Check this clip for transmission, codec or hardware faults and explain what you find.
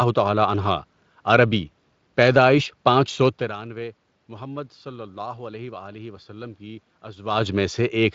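Nothing in this speech recording points to a transmission, codec or hardware fault; the background room noise and the level shifts around 3.5 and 7 seconds, where the talker seems to move relative to the microphone, are just part of how it was recorded.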